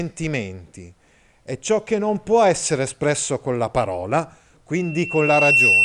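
Loudspeaker feedback squeal hits this speech from 4.76 s to the end, after "espresso con la parola". The microphone re-amplifies its own loudspeaker until a 2.7 kHz tone swells, within a second, above the speech.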